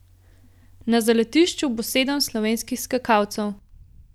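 Listening through this speech recording, nothing stood out as a technical problem at any point.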